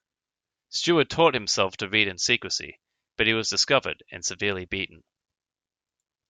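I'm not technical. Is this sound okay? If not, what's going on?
Yes, no technical faults are audible in this recording.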